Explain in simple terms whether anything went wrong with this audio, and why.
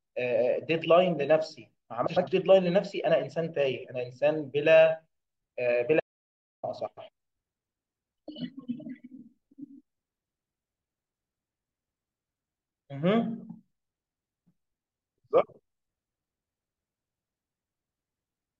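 Yes, two kinds of fault can be heard.

Frames out of order: the audio travels in small packets, and three times neighbouring runs of them were played in swapped order, with each run about 0.1 s long, which fits runs of four frames. The pairs at 2.06 to 2.28 s, 6.87 to 7.09 s and 15.95 to 16.16 s each play with their halves exchanged. Each place sounds like a brief garbled flutter, but nothing is lost.

Audio dropout to silence: from 6.00 to 6.63 s the incoming sound was cut off, most likely by a disconnection or a brief mute, while recording carried on writing silence. The sound stops mid-flow and comes back abruptly. The gap of about 0.63 s is total silence, not even background hiss, and whatever was said then is gone for good.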